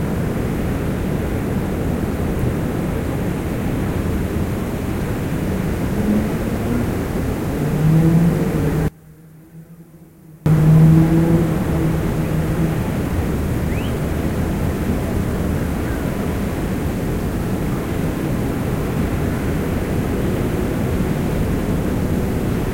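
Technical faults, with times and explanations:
8.88–10.46 s, one channel inverted: the sound, background included, drops by about 28 dB to a small residue, likely from one channel's reversed polarity cancelling shared content in the mono sum. The waveform narrows sharply and the spectrogram darkens across all frequencies.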